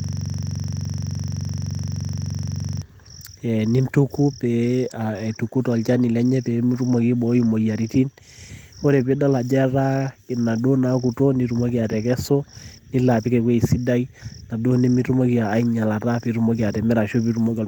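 Right from the start, and already going when the clip opens, there's a system hang loop running until about 2.82 s. The machine or its audio driver froze while the hardware kept replaying the same ring buffer, so one 42.67 ms slice of speech repeats exactly, dozens of times over. At a loop rate of 23.4 Hz it comes across as a coarse, rattling buzz, and that length fits a 2048-sample buffer.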